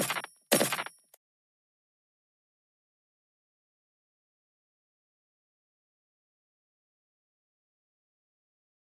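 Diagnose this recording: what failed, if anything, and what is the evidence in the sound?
No fault found anywhere.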